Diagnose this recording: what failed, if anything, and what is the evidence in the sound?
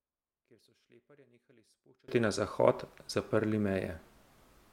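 From the start to about 2.08 s the speech nearly vanishes, down by about 35 dB, with only a faint trace left. That's likely one channel inverted, a polarity flip in the analogue wiring. Summed to mono, the centred voice cancels itself out.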